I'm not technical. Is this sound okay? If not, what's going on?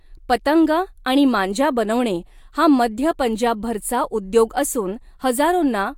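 Yes, nothing wrong can be heard in this recording.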